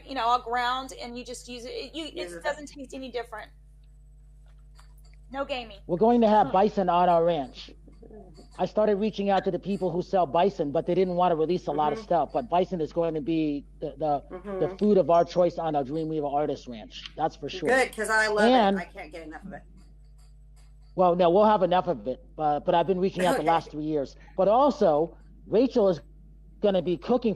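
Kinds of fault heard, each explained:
Mains hum: a steady low 50 Hz drone sits under the sound for the whole clip, about 25 dB below it, from power-line coupling such as a ground loop.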